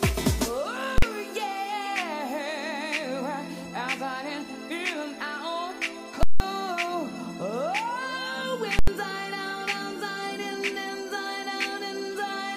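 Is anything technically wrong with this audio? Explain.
Yes. Invalid numbers at full scale appear at 0.98–1.02 s, 6.23–6.40 s and 8.79–8.88 s. In each case a calculation produced infinite or invalid values, so the output was pinned to maximum level for a whole processing block. The first burst lasts about 43 ms and sounds like a single loud bang, which fits a 2048-sample block. The second lasts about 171 ms and is a harsh pop at each edge with silence between, which fits an 8192-sample block. The third lasts about 85 ms, which fits a 4096-sample block.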